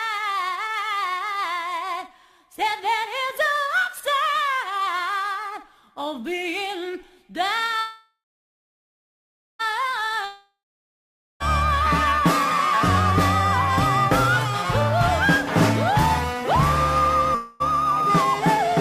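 A call audio freeze runs from 7.79 to 9.61 s. The sound stalls, the last moment carries on as a fading buzz, then about 1.4 s of silence follows before the audio resumes where it stopped. Packets were likely delayed until the jitter buffer ran dry, inserting 1.8 s of gap without losing anything.

A long network dropout follows at 10.25 to 11.42 s. The last sound again trails off into a fading continuation, leaving about 0.8 s of silence, but this time the audio returns further along, with about 1.16 s that never arrives. This is likely a stretch of lost packets.

Jitter buffer speed-up runs from 17.08 to 18.73 s. The audio plays at 105% speed with unchanged pitch and sounds slightly hurried, as the receiver trims short pitch-period slices, around a tenth of a second in total, to shed built-up delay.

Within that stretch, a brief call audio freeze at 17.35 to 17.62 s fills 0.25 s with a fading continuation of the last sound, with no silence and nothing missing, likely from another short delivery stall.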